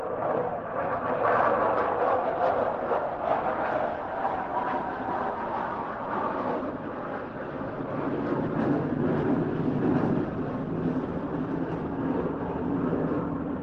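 There are no technical faults to describe at any point in this audio.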